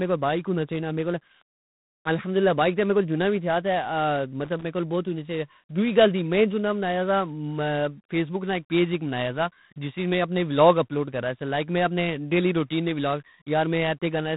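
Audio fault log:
throughout: G.726 ADPCM. The speech passes through a waveform codec that encodes each sample as a few bits of difference from a running prediction, at a density that fits 24 kbit/s. The coarse steps leave a harsh, rasping hiss that rises and falls with the speech, and nothing above 3.8 kHz survives.
4.44 to 4.64 s: loose connector crackle. A worn or dirty contact in the signal path briefly loses and regains connection as it shifts, chopping the audio on and off many times within about 0.2 s. This is heard as an irregular scratchy burst of crackle just before "کول بوت ہونی سی".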